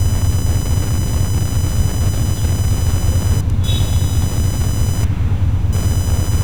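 From start to finish, a thin buzzing chirp rides underneath the sound, pulsing at around 1 kHz and sitting roughly 15 dB below it. This is computer activity noise: changing processor or graphics load disturbs the ground shared with the audio circuitry.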